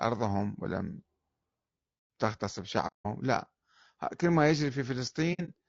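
Throughout the clip the speech has a rough, grainy texture, with noise filling the gaps between the pitch harmonics and an upper band that sounds thin and synthetic. This points to low-delay AAC compression, likely AAC-ELD at a low rate near 32 kbps. Its short frames resolve harmonic structure poorly, so at this rate the encoder cannot keep the spectrum clean and the damage is plainly audible.

From 2.87 to 3.07 s there is AAC frame loss with muting. About 180 ms of signal drops out, which fits six consecutive lost frames whose spectra the decoder replaced with silence. Because the overlapping transform windows taper the edges, the sound fades out and back in instead of cutting off, giving a soft-edged hole.

Between 5.33 and 5.50 s the same fault recurs in scattered form. About 90 ms is lost in short gaps spread over roughly 150 ms, the longest about 70 ms, so the sound flutters briefly instead of leaving one clean gap.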